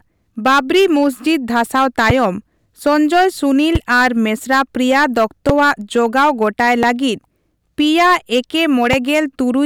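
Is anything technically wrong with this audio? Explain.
Yes. Hard clipping runs through the whole speech clip: driven about 15 dB past its limit, about 4 percent of samples are sliced flat, giving a harsh fuzz that follows every loud syllable. Five loud pops, each about 25 ms long and roughly 20 dB above the speech, land at 2.10, 3.75, 5.49, 6.83 and 8.93 s. Each is a single sharp click from a sudden voltage step, likely a switch, static or driver glitch. Unlike the clipping, the pops sit on top of the speech regardless of its level.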